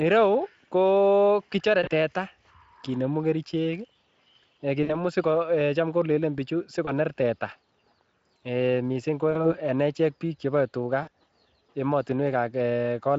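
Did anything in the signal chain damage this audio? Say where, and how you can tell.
Yes. At 1.83–1.90, 4.83–4.99, 6.85–6.90, 9.31–9.57 and 11.03–11.10 s the speech smears into a brief buzzy tone or coloured noise that fades and stays weak just afterwards. That is VoIP packet loss concealed by the speech codec: network gaps that fit one to three lost 20 ms frames, bridged by the Speex decoder's extrapolation.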